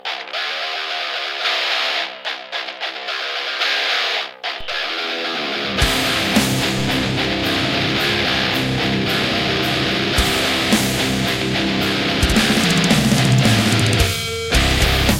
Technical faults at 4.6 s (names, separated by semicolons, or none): DC step